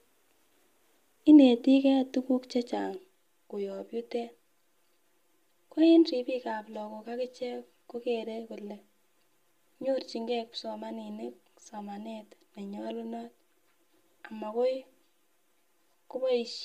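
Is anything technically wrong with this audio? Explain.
Yes. Channel delay (comb filtering) from 2.96 s to the end: one channel arrives about 5 ms late, so summing cancels evenly spaced frequencies from around 100 Hz, making the speech hollow and phasey.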